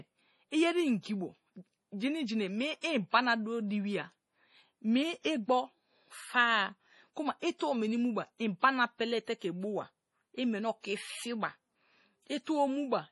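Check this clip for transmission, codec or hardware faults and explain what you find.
Two problems stand out: heavy lossy-codec damage across the whole clip, and one smeared attack partway through.

From start to finish the speech has that watery, swirly texture, with nothing at all above 11.5 kHz. This is likely MP3 compression, and heavy damage like this fits a low bitrate around 32 kbps. Starved of bits, the encoder chops the treble at a fixed cutoff and drops weak frequency lines, which flicker in and out between frames. That flicker is what gives sibilants their chirpy, metallic edge.

At about 7.58 to 7.60 s there's pre-echo, a short hiss running roughly 29 ms ahead of a sharp onset. The codec spreads its quantisation noise across a whole block, so noise sized for the loud attack also fills the quiet moment before it. The attack itself comes across soft and smeared rather than crisp.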